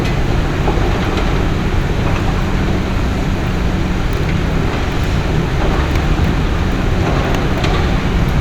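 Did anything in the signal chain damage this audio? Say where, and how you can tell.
No, nothing in the chain from capture to playback audibly damages this sound, and no stage leaves evidence of a fault anywhere in the clip.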